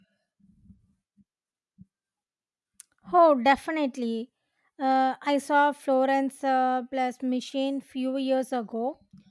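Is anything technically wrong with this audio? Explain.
No, nothing technically wrong turns up anywhere in this recording; it needs no repair.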